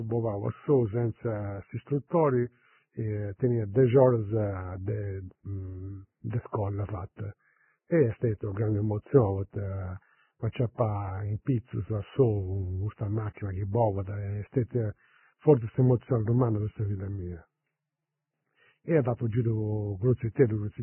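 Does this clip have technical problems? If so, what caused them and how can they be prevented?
Yes. Throughout the speech there is heavy damage that sounds like Vorbis compression, likely from encoding at a very low bitrate, roughly 10 kbps. Nothing is present above 3 kHz, so sibilants and consonant detail are dull and muffled. Below that cut-off the treble is grainy and hissy because the residue over the spectral floor has been quantised so coarsely that fine detail is replaced by noise of similar energy, roughening vowels and smearing consonant onsets. To prevent this, encode Vorbis at a substantially higher quality setting, or use a codec designed for low-bitrate speech.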